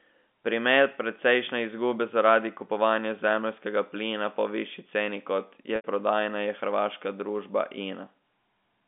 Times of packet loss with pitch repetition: 5.76-5.84

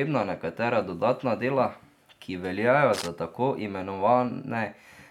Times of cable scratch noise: 2.93-3.08

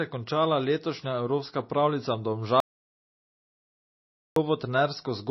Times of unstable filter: none

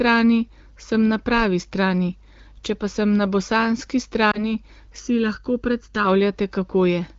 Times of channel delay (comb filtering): 5.00-6.05

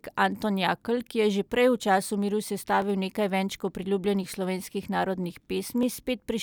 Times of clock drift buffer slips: 0.81-5.83

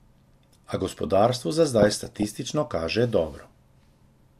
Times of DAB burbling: 1.79-2.25

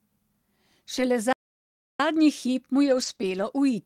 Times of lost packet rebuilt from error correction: 0.97-0.99, 2.86-3.48

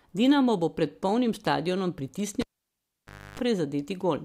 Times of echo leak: none

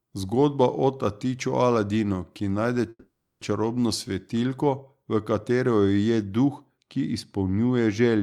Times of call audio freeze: 2.89-3.43

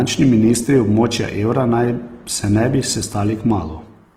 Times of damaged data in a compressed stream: none

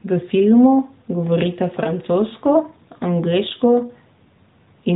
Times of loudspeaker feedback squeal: none

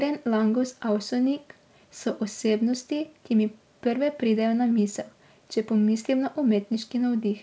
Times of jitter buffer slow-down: none

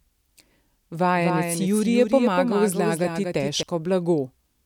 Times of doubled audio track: 1.15-3.63

